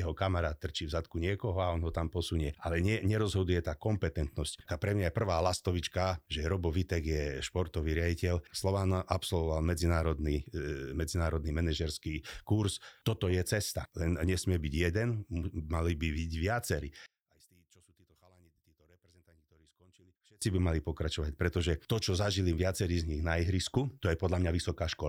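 From 17.06 to 20.42 s the speech drops away by about 33 dB, background and all, leaving only a small residue. That's most likely one channel inverted: with one side's polarity flipped, everything the two channels share cancels when they're summed to mono.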